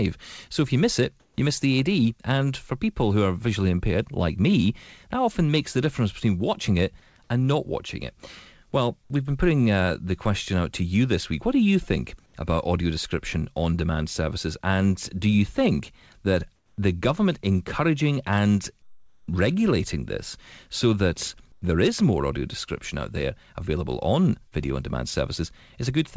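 At 1.20–1.38 s, 12.26–12.34 s, 16.56–16.78 s, 18.82–19.28 s and 21.52–21.62 s, comfort noise replaces the background: a flat, featureless hiss sits about 5, 4, 4, 6 and 2 dB louder, quieter, louder, quieter and quieter respectively. This likely comes from discontinuous transmission, where the receiver synthesises the noise while the sender is silent. At 24.48–24.54 s, a short concealed packet loss leaves a 40 ms gap, bridged by extrapolated audio that sounds like a brief smear. Across the whole clip, nothing is present above 8 kHz, which fits a wideband call codec such as G.722.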